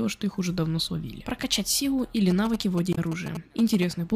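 GSM signalling bursts run from 2.31 to 3.84 s. A 2G handset close to the playback or recording chain is exchanging short control transmissions with its network, and some circuit in the audio path rectifies that radio energy into the signal. The result is a galloping dit-dit-dit of brief buzzes pitched at about 217 Hz, the frame repetition rate of GSM. It sits roughly 10 dB below the programme material.

Damaged data in a compressed stream appears from 2.91 to 2.98 s, inside the buzzing stretch. For roughly 70 ms, the encoded bytes reaching the decoder are corrupt. The decoder cannot parse those frames properly, falls out of step with the bitstream and hunts for the next valid frame header before resuming. That failure produces a short disturbance in the sound.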